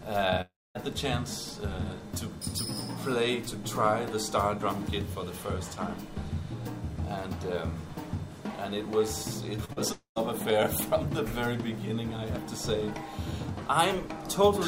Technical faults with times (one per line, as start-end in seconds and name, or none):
0.41-0.77 long network dropout
9.65-9.78 short concealed packet loss
9.92-10.18 long network dropout